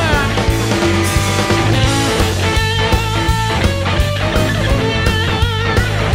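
At 5.27 to 5.30 s a corrupt frame is decoded: flipped bits in a couple of compressed frames were played through, misreading gains and codes so energy lands at wrong frequencies. It sounds like a chirp, squeak, blip or burst of noise.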